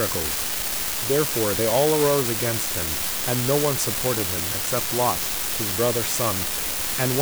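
From start to finish the speech carries an unreliable data bit: one marginal bit flips in random samples, each adding a fixed step of about -15 dBFS, heard as steady crackling fizz through pauses too. The waveform shows equal-height spikes; the spectrogram shows broadband speckle everywhere.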